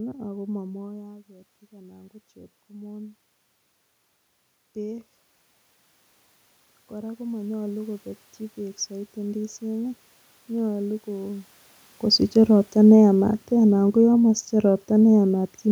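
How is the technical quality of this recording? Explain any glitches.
The recording has two slow level swells, both from automatic gain rising. From 1.27 to 3.27 s, the voice and the room noise behind it climb together by about 6 dB, and from 6.9 to 10.02 s they rise by about 7 dB. The input had dropped by about 12 dB around the first swell, consistent with the talker moving back from the microphone just before. The automatic gain control heard a quieter signal and raised its gain gradually, pulling up the background along with the speech.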